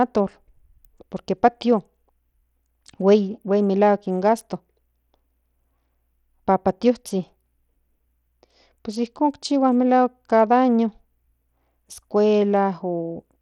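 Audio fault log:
Throughout: likely Bluetooth SBC compression. The damage is plainly audible across the speech. The treble sounds thin and flickers in and out. A gritty noise clings to the sound, with a harsh aliased edge. This fits a low bitrate around 80 kbps. SBC splits the signal into a few wide sub-bands. At this rate the weak top bands get few or no bits and drop out. The rest are coarsely quantised, which leaves the grit.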